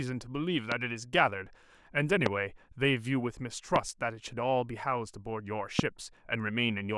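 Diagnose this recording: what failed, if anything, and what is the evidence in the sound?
Four loud pops, at 0.72–0.74, 2.26–2.29, 3.76–3.78 and 5.79–5.81 s, each a single sharp transient about 20 dB above the speech, which continues underneath. The likely stage is analogue wiring: an intermittent connection or static discharge injecting brief voltage steps.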